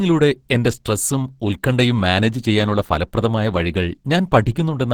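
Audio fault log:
throughout Opus compression: the speech has a plainly audible hoarse, grainy roughness. The upper bands sound noise-filled rather than hollowed out, so there is less of the watery swirl and fewer spectral holes than with MP3. Content still reaches about 20.2 kHz, so the bandwidth is not narrowed and the damage is in texture. That mix of a muffled, hoarse low band and noisy upper bands likely comes from Opus in its hybrid speech mode, which fits a rate near 16 kbps.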